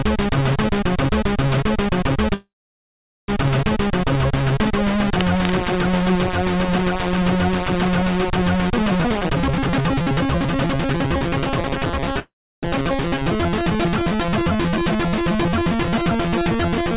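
At 2.34 s the sound freezes for close to a second, until 3.30 s. There's a brief fading tail, then about 0.8 s of silence, and it picks up right where it left off. That's a call audio freeze. Packets likely stalled and the jitter buffer ran dry, so a gap got inserted rather than anything being lost.

From 5.05 to 5.58 s there's a burst of scratchy, rustly noise sitting about 10 dB under the signal. That's cable scratch noise, likely a worn connector or lead being moved so its contact resistance jumps around.

Between 9.05 and 12.12 s everything runs at about 127% speed with the pitch unchanged, so it feels rushed. That's a jitter buffer speed-up. After the backlog built up, the receiver trimmed roughly a second's worth of tiny pitch-period slices to catch up.

Right after, at 12.19 s, comes a second freeze of about 0.43 s, mostly silent for about 0.33 s, ending at 12.65 s. It's likely the same jitter buffer underrun story, with nothing skipped. 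Throughout, there's nothing above 4 kHz, which points to a G.711 A-law call path.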